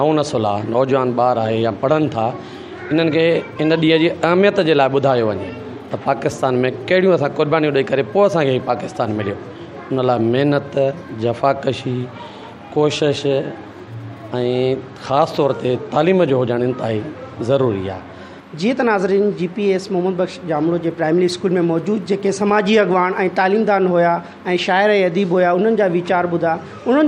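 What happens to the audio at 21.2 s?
Nothing goes wrong at 21.2 s; the audio carries on intact through that moment with no dropout, glitch or distortion to be heard.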